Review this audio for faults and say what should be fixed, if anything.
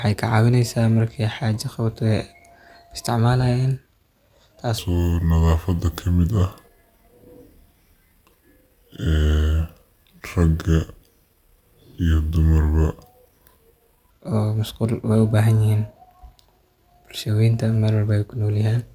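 From 4.78 s to 14.10 s the speech plays at the wrong sample rate. It runs at 0.726 times normal speed and drops about 5.5 semitones, which fits 44.1 kHz audio read out at 32 kHz with no conversion. Because tempo and pitch fall together by the same ratio, this differs from a pitch shift or time-stretch, which would alter only one. To prevent it, check the source's sample rate and resample to the playback rate before output.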